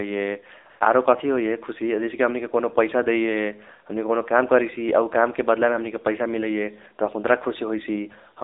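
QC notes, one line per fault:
throughout: AMR narrowband mobile codec, speech squeezed into a 300 Hz to 3.7 kHz line at low bitrate, fitting 7.4 kbps; buzzy, synthetic tone; spectrogram shows a hard ceiling near 3.7 kHz.
0.70 to 0.80 s: AMR comfort noise, 100 ms where speech frames stopped and smooth synthetic hiss filled in; waveform shows a flat, even noise patch.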